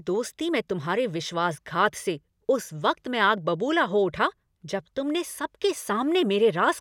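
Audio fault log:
No technical problems can be heard anywhere in the recording, and the speech signal stays continuous and intact throughout.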